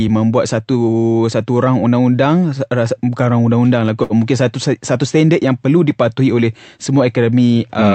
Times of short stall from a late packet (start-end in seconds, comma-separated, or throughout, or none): 4.03-4.13